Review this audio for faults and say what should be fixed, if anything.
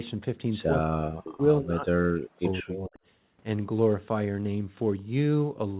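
From 0.77 s to 3.0 s the speech sinks sharply, by around 40 dB at its deepest, for about two seconds in all. This is likely speech suppressed in double talk. When both ends talk at once, the echo canceller cannot tell the near talker from loudspeaker echo, so it attenuates everything. The lack of anything above 4 kHz is a separate matter and points to a G.711 call path. To prevent the suppression, tune the canceller's double-talk detection so near speech is kept during overlap.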